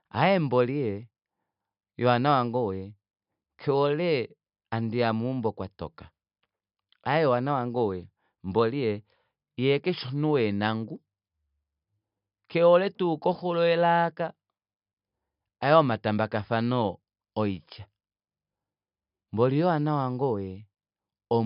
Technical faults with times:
none

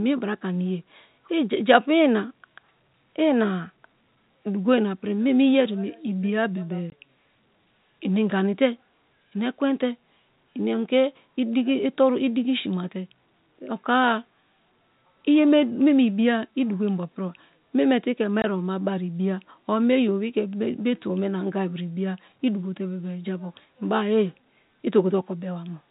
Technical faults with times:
6.90 packet loss filled with silence
18.42 packet loss filled with silence

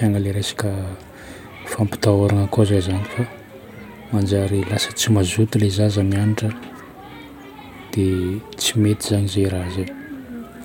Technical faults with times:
none

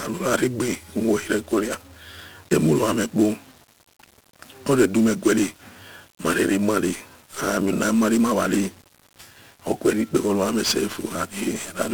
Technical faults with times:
0.00-11.94 1-bit DFPWM compression

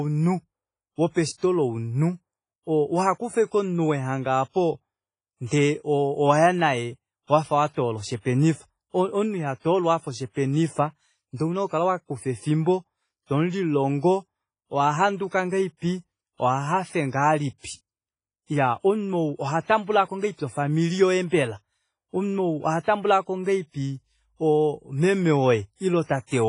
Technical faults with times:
0.00-26.48 WMA compression

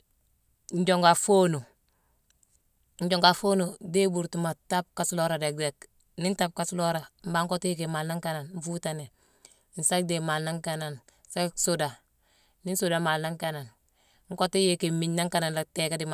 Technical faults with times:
none

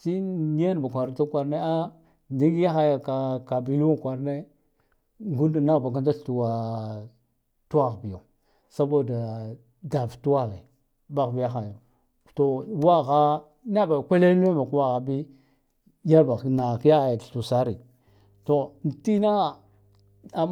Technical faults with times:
18.07-20.52 mains hum

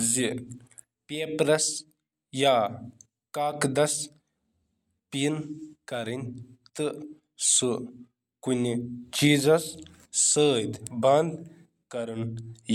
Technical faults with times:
none

